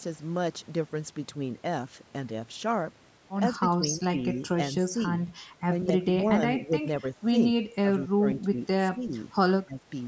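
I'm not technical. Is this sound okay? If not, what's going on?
No. Speech suppressed in double talk: the voice briefly dips or partly cuts out at 3.6–4.6, 5.9–6.2, 6.6–7.0, 7.8–8.6, 8.9–9.1 and 9.6–9.9 seconds, likely because the call's echo canceller turned it down while the other side was talking.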